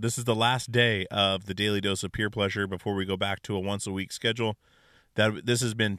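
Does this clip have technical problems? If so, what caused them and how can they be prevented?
No, this clip has no technical problems, so there is nothing to prevent.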